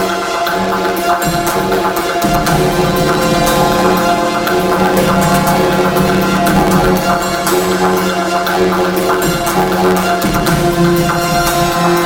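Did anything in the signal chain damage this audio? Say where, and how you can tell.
Yes. Planar audio read as interleaved affects the whole clip, at the sample-format conversion stage between a planar buffer and an interleaved consumer. Each block of about 11.6 ms is treated as alternating left-right pairs when it actually holds all of one channel and then all of the other. The block therefore plays as two double-speed halves, which produces a robotic buzz at about 86 Hz rather than a clean octave jump, consistent with 512-sample blocks.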